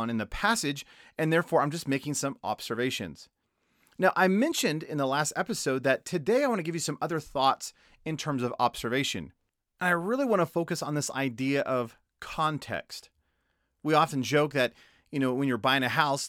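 At 0.68 s, right after "in the" and before "and therefore I'm just", there's one sharp click. That's most likely dropped samples: probably just a couple went missing, so the waveform jumps straight to a later value. The gap is far too brief to lose any sound, only the tick.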